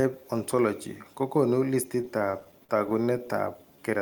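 Repeated stalls (stutter) run from 2.01 to 3.30 s: packets reached the jitter buffer late, so it ran dry fifteen times, each gap up to 44 ms, bridged by stretching the preceding speech. Nothing is lost, but about a sixth of that stretch is filler, so the speech drags and stutters.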